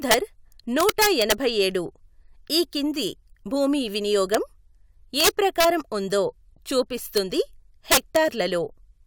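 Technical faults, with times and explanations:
0.11–0.14 s, 0.80–1.32 s, 4.34 s (just after "ఈ కింది భూమి"), 5.20–5.65 s, 7.17 s and 7.92–8.16 s, integer overflow: loud speech peaks pushed the sample values past the top of the integer range, by about 3 dB, 3 dB, 0 dB, 5 dB, 0 dB and 8 dB. Instead of being limited, they wrapped around to the opposite extreme, so each over-range sample jumps across the full scale. The result is violent cracks, far harsher than clipping. The worst is at 7.92–8.16 s.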